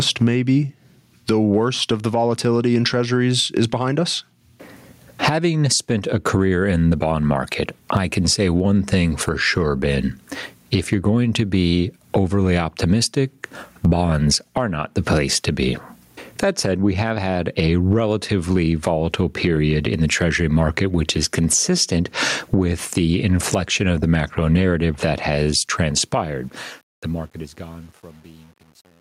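Throughout the speech, gain pumping ducks the level by around 20 dB under loud sounds, likely a fast limiter behind excessive gain. From 25.54 s the fade-out shows truncation distortion. Steps suggesting an 11-bit stage without dither turn gritty, worst from 27.2 to 29.0 s, unlike clean hiss.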